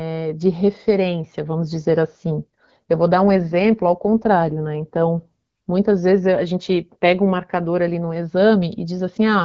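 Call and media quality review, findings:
Speech turns rougher, more synthetic 3.94–5.27 s, band and continuity intact. AMR rate drop, consistent with AMR-WB stepping down from 12.65 to 8.85 kbit/s, bits diverted to error protection.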